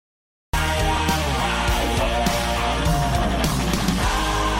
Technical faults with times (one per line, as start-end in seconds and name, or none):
0.00-0.53 cut-off start